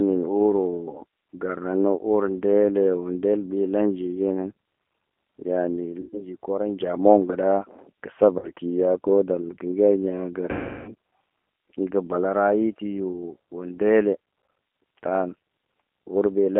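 Throughout, the speech carries G.729 codec damage: band-limited to roughly 250 Hz–3.4 kHz, with the rough, slightly synthetic texture of an 8 kbit/s pulse-based coder rebuilding the voice from a filter and pitch predictor. VoIP packet loss concealed by the speech codec appears at 6.01–6.33 s (120 ms lost), 8.39–8.50 s (40 ms) and 10.51–10.93 s (360 ms). Each time the decoder extends the last pitch and filter into a fading buzzy tone or coloured noise, and the speech stays weak briefly after recovery.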